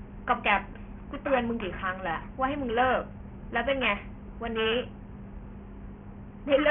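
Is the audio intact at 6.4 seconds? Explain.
No. Aliasing runs through the whole clip, 6.4 s included. The sound suggests a drop to a rate near 6 kHz with no filter first. Energy above 3 kHz folds back to false pitches, fairly strong, so sibilants sound gritty and metallic.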